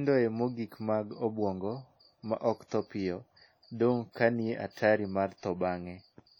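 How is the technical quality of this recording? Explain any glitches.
The speech is marred by heavy codec damage throughout. The sound rings and washes, with hiss that breathes with the signal. This is likely WMA compression, at a low bitrate that fits around 32 kbps. Long transform blocks smear quantisation noise over tens of milliseconds, and weak spectral detail is dropped.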